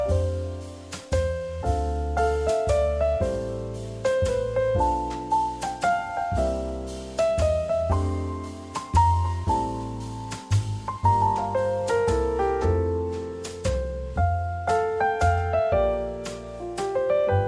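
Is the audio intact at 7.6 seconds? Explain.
Yes, the audio at 7.6 seconds is intact, with no dropout, glitch or other fault.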